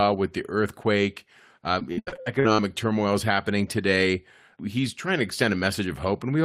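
Repeated packet loss (robotic sound) runs from 1.79 to 2.60 s. Eight gaps in the stream, the longest 75 ms, are each patched by stretching the preceding speech, covering about 38% of that span. This gives choppy, robotic speech with fragments missing.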